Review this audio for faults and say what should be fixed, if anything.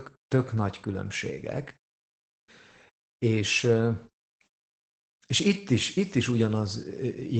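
Opus voice compression runs throughout this speech, with nothing above about 8.9 kHz. The linear-prediction coder codes the excitation coarsely at a rate that fits about 12 kbps, so the voice sounds muffled, hoarse and slightly robotic. Encode at a higher bitrate to prevent it.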